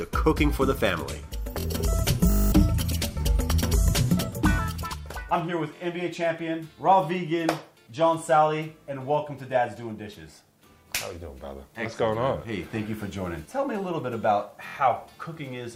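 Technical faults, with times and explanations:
1.60–1.65 s, 5.76–5.81 s and 14.68–14.75 s, repeated buffer: a 23 ms chunk plays again twice, twice, then three times, each with a hard join, so you get a quick stutter. The playback device ran dry and replayed its last block, which fits a 1024-sample buffer.
2.30–2.52 s, system hang loop: a single 20 ms slice loops eleven times, so it comes across as a brief 50 Hz buzz. Something froze while the hardware kept cycling its ring buffer, and roughly a fifth of a second of audio is lost.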